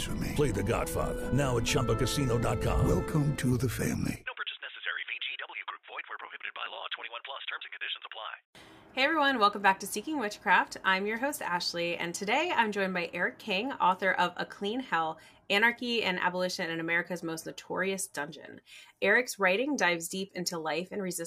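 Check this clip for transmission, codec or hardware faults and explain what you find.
One processing fault stands out. From 6.23 to 7.09 s, overlap-add ripple: frames rejoined with mismatched overlap swing the level about 11 dB around 150 times a second, a metallic buzz with extra tones around each note.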